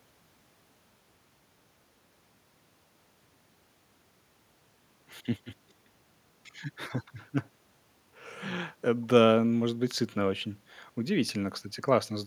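No technical faults can be heard anywhere in the recording.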